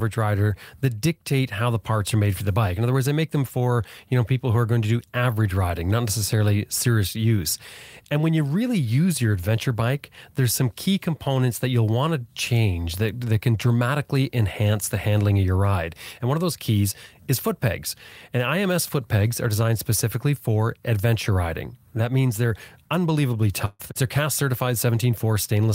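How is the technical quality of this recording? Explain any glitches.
One glitch stands out, a burst of packet loss near the end, from 23.65 to 23.81 s, right after "means they're unbelievably". About 140 ms of audio never arrived. The receiver filled that stretch by stretching the last received sound and fading it, which gives a brief held buzz or hiss with only about 10 ms of true silence. Speech then resumes further along, with that portion missing. Unlike a plain dropout, the gap is filled with fading sound rather than cut to silence.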